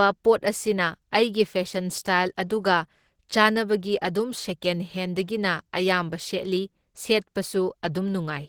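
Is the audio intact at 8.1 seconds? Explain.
No. At 8.1 seconds the speech carries the same damage heard throughout the clip: a muffled, hoarse texture. That points to Opus compression, likely at a low bitrate near 16 kbps, where the encoder's hybrid speech mode starves detail. Content still reaches about 20.2 kHz.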